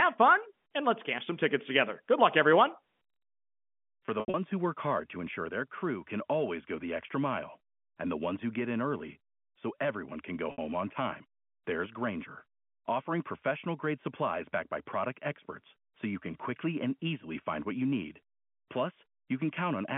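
Speech over a narrowband telephone line, limited to about 150 Hz to 3.4 kHz, shows packet loss with pitch repetition at two points. From 4.06 to 4.34 s, gaps totalling about 140 ms are scattered over 280 ms, the longest run 80 ms, and the concealer bridges each by repeating the last pitch period, giving a buzzy, held quality that fades. At 10.52 s a single 60 ms loss produces the same brief held tone.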